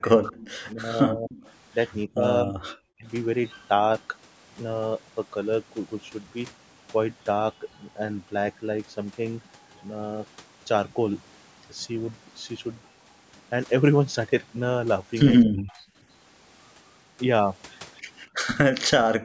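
Speech suppressed in double talk opens the clip, from 0.0 to 1.32 s: the speech dips in pieces totalling well over half a second, at worst by roughly 40 dB, as if both ends of a call were talking at once and the echo canceller, unable to separate the near talker from the loudspeaker echo, likely pulled everything down together.

An echo leak overlaps this from 0.25 to 0.59 s and returns from 1.31 to 1.51 s: a faint, delayed copy of the speech trails the original by 248 ms, about 20 dB down in the first stretch and about 25 dB down in the second. This points to a loudspeaker-side echo canceller that left part of what its microphone picked up in the signal sent back.

The same double-talk suppression cuts into the speech again from 2.06 to 3.06 s, for a total of most of a second, and then only briefly at 15.45 to 15.57 s and 18.74 to 18.82 s. Each of these is a short bite of around a tenth of a second, again dropping sharply.

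Background gated by the echo canceller appears at 15.85 to 15.95 s, where the room sound ducks by about 15 dB for a tenth of a second while the canceller clamps the microphone. It happens again at 19.19 s and runs to the end, this time falling by about 40 dB.

Throughout, the call's microphone processing leaves nothing above 8 kHz.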